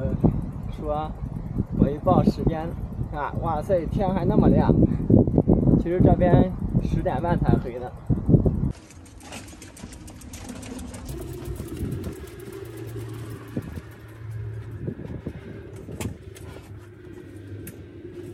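From 11.09 s to the end, a section at the wrong speed runs 1.34 times fast and sits about five semitones higher. Tempo and pitch jump together, unlike a pitch shift or time-stretch, which change only one. The likely cause is a mismatched playback clock.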